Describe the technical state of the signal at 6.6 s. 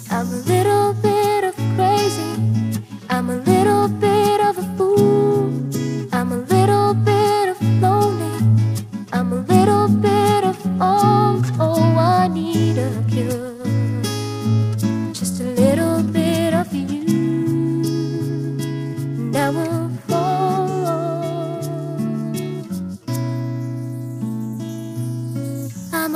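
Periodic clock jitter is present at 6.6 s, as it is across the whole clip from start to end. The converter's sampling clock is being wobbled at a steady rate of around 500 Hz, so every component of the sound gains sidebands spaced about that far above and below it, with higher frequencies affected more. The result is a rough, metallic edge riding on the audio, which disappears whenever the sound falls silent.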